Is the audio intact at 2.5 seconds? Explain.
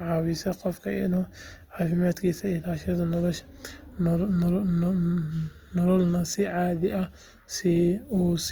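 No. At 2.5 seconds, as across the whole clip, the speech carries plainly audible Opus compression, likely from a low-rate music-mode encode near 24 kbps. Starved bands are filled with folded or noise content, so the voice sounds rough and grainy. A spectrogram shows smeared, noisy band texture without obvious holes, extending to about 20 kHz.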